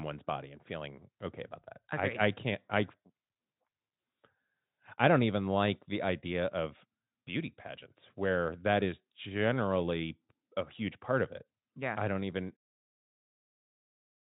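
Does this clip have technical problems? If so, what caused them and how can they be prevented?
No, nothing stood out as a technical problem on listening to this speech clip.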